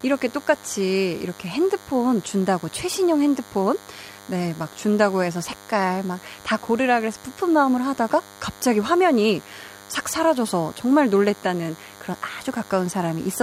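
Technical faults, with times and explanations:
Throughout, DECT cordless phone buzz. A nearby handset's radio bursts, 100 times a second, get rectified into a thin, harmonic-rich buzz roughly 25 dB below the speech.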